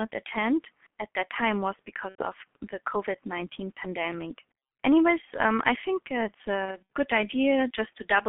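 Throughout, the speech sounds muffled and hoarse with smeared consonants, confined to roughly 200 Hz to 3.5 kHz. This points to the G.723.1 codec at around 6.3 kbit/s, whose 30 ms frames blur detail. From 2.09 to 2.24 s, after "at that time was", and from 6.66 to 6.79 s, after "um I think it's", the sound stretches into a buzzy tone or coloured noise that fades. This is VoIP packet loss concealed by the speech codec, consistent with about 90 ms lost, then 120 ms scattered over 240 ms with runs up to 60 ms.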